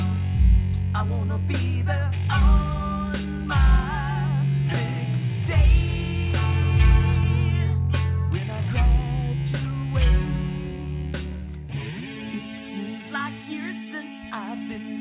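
Nothing technically wrong turns up anywhere in this audio, so there's no fault to point to here.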